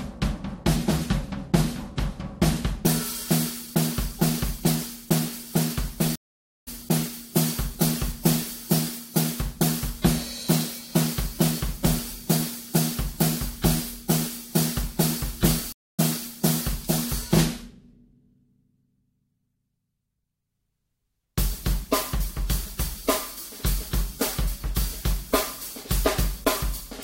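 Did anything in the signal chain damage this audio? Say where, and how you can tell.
Yes, at the network stage: two stream reconnects. Sound stops at 6.16 s for 0.51 s and at 15.72 s for 0.26 s, then a restarted decoder resumes about half a second and 150 ms later. Unlike a dropout, the material skips ahead rather than continuing.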